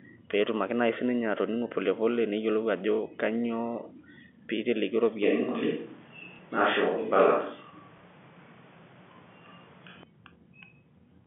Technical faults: switch to a distant microphone; packet loss with last packet repeated

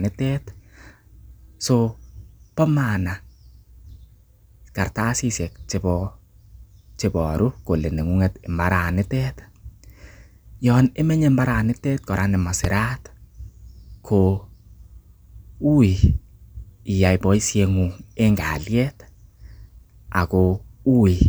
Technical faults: loud pop

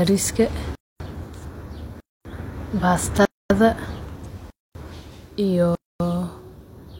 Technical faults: gap between chunks

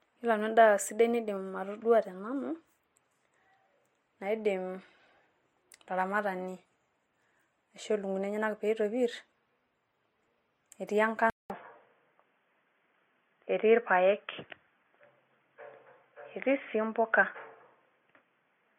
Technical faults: transcoding between lossy codecs; input switched to a poorer device

